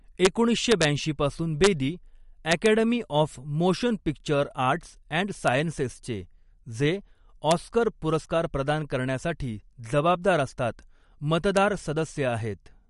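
Throughout the speech, a watery, swirling texture and nothing above 11.2 kHz point to MP3 compression, likely at a low bitrate around 50 kbps. Violent cracks, far sharper than clipping, strike at 0.25 s, 0.71 to 0.85 s, 1.64 to 1.67 s, 2.51 to 2.66 s just before "ऑफ मोशन पिक्चर", 5.48 s, 7.51 s and 11.57 s. This is integer overflow: peaks only about 0 to 2 dB over the limit wrapped to the opposite sign.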